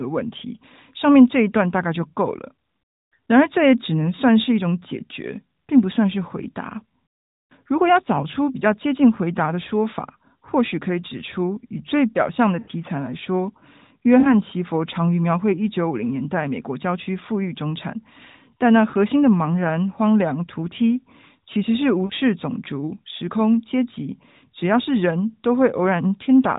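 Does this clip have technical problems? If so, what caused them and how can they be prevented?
Yes. There are lost AMR speech frames at 12.6–12.71 s, 14.2–14.33 s, 18.9–18.95 s and 22.06–22.13 s. Each sounds like a short smeared dip. The decoder repeated its last good settings at falling gain. The first gap is about 80 ms, the rest about 40 ms. A stronger radio link or better error protection would prevent these losses.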